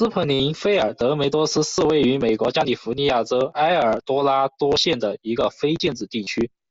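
A speech clip with two bursts of concealed Bluetooth headset packet loss, at 0.34 to 0.40 s (about 53 ms) and 6.24 to 6.27 s (30 ms). Each gap, long enough to suggest a run of several dropped packets, was filled by repeating a recent stretch of waveform, so it sounds like a brief buzzy tone at steady level with a slight warble on recovery. A waveform shows periodic copies with flat amplitude, and a spectrogram shows evenly spaced harmonic bars. The band sits below 8 kHz, as expected for an mSBC link.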